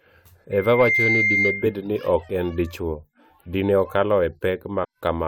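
From 0.51 to 1.83 s, loudspeaker feedback squeal: the microphone re-amplifies its own loudspeaker until a 2.1 kHz tone builds over under half a second, howling above the speech until "ni ok en dichwo". At 4.83 to 4.85 s, damaged data in the compressed stream throws the decoder out of sync, leaving a brief glitch.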